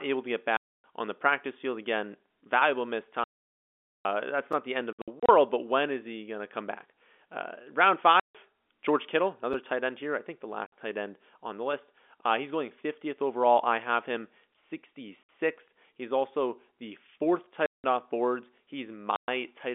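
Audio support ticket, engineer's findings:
Packet loss filled with silence: hard-edged dropouts at 0.57–0.84 s (between "able to get" and "on the practice field"), 3.24–4.05 s, 4.93–5.29 s (scattered, 60 ms longest), 8.20–8.35, 10.66–10.72 (before "tight end on the"), 15.23–15.29, 17.66–17.84, 19.16–19.28 s. Holes are all multiples of 30 ms, which fits 30 ms packets. The receiver is playing silence instead of concealing the loss.

Gap between chunks: short 6.5 ms holes at 4.53 s and at 9.53 s (just before "tight end here I"), spaced 5 s apart. This looks like chunked delivery with padding or a late-starting player at each join. No audio is lost, just interrupted at each join. The G.711 telephone band underneath sounds clean.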